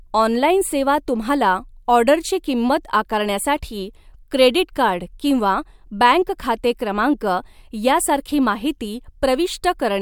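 No technical faults can be heard anywhere in the speech recording, which holds steady and intact throughout.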